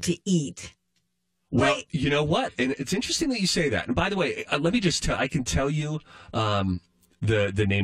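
Channel delay (comb filtering) runs through the whole speech clip. One channel arrives around 10 ms late, and summing to mono cancels shared content at evenly spaced frequencies. Notches start near 40 Hz and repeat about every 100 Hz. The result sounds hollow and phasey.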